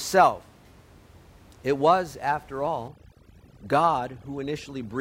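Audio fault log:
2.88 to 5.01 s, overdone noise removal: right after "was after", the room noise, about 26 dB down, drops and breaks up into twinkly specks.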